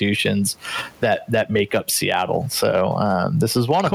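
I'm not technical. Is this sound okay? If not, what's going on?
No. Throughout the clip, the recording level is pushed slightly past what the equipment can carry, so the tops of the loudest moments are sliced off flat. This is hard clipping. You hear it as brief crackles on the strongest peaks of the speech, touching only a small fraction of the sound.

The volume also swings up and down noticeably all the way through. The likely cause is gain pumping: the input was set far too high, and an automatic limiter pulls it down hard whenever the speech gets loud. Everything sounds squashed toward one level.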